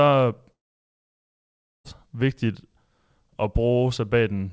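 Long network dropout, 0.53 to 1.87 s: sound fades into a brief buzz, then 1.3 s of silence, likely from lost packets, and resumes beyond the gap.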